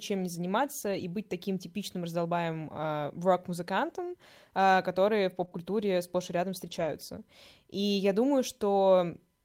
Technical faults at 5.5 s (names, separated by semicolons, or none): lost packet rebuilt from error correction; short concealed packet loss